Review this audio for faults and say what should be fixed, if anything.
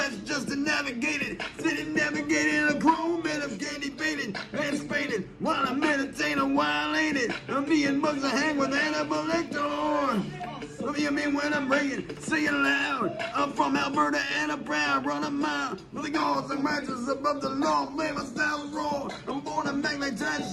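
Nothing needs fixing here, as the signal holds steady throughout with no audible technical faults.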